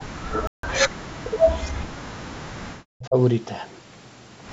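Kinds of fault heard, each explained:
Bluetooth dropout: Audio packets likely failed to reach the headphones in time and were thrown away, leaving playback with nothing to output. The speech cuts to silence for about 160 ms, from 0.47 to 0.64 s, then resumes further along as though it had kept playing underneath.
Speech suppressed in double talk: The echo canceller, likely unable to separate the near talker from loudspeaker echo while both sides spoke at once, turned everything down. Between 0.88 and 3.16 s, about 2 s of speech is attenuated, falling by about 40 dB at its deepest.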